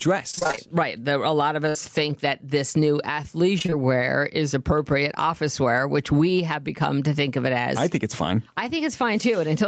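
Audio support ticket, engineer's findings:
Gain pumping throughout: quiet passages and the background swell, then duck by around 10 dB under each loud syllable, so levels are squashed. Likely an overdriven input with a fast limiter pulling gain down.

Repeated packet loss (robotic sound), 0.31–0.59 s and 3.59–3.74 s: choppy speech with pieces missing, about half of each span concealed. Jitter buffer repeatedly extends the last audio over short gaps.

Burst of packet loss, 1.69–1.77 s: a brief held, fading fill, then speech resumes about 60 ms further on. Receiver concealment over late or lost Opus packets; band ends at 8 kHz.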